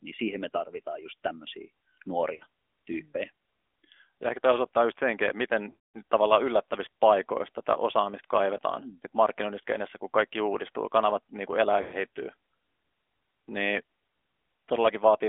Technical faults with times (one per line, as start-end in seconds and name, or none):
0.00-15.28 AMR narrowband mobile codec
2.36-2.43 lost AMR speech frames
5.70-6.03 lost AMR speech frames
11.82-12.06 lost AMR speech frames